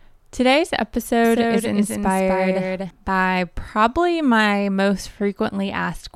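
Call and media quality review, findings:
Doubled audio track, 1.24–2.90 s, starting just before "by probably my most". Likely a second, slower capture path mixed alongside the main one. Dry, full-band copy trails by roughly 300 ms, about 5 dB down, starting and stopping abruptly.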